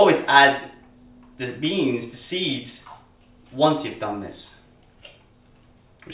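Nothing goes wrong anywhere in this one, so there's no problem to point to at any moment of the audio.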